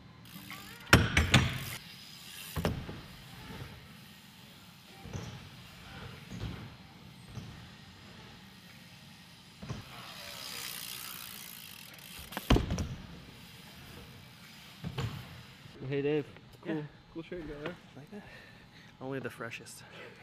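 No technical faults can be heard anywhere in this clip.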